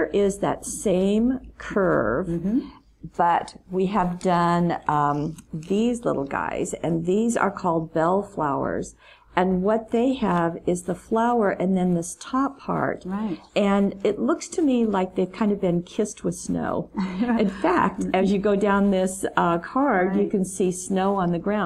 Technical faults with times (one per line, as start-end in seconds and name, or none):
none